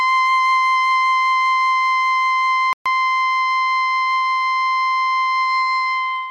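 At 2.73 s the music drops out to dead silence for about 0.13 s, then comes back in at 2.86 s. It's a clean hole rather than a fade or a glitchy burst, which sounds like a Bluetooth stall. The likely story is that interference held up packets on the wireless link, the headphones' small buffer ran empty, and playback simply sat there until the retransmitted audio showed up.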